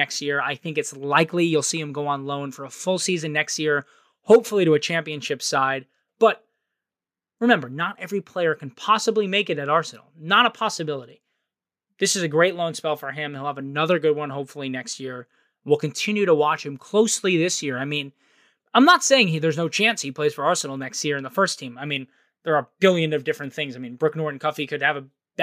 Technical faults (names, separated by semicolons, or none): none